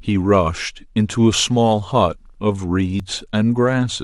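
At 3.00 s the speech jumps, the signature of an overlap between stream segments. Two adjacent segments carried time stamps that overlapped, and the player discarded the shared span as if it were duplicated, although that audio existed only once. About 7 ms of real signal was lost, so the waveform steps abruptly from one point to a later one. The discontinuity is heard as a tiny skip.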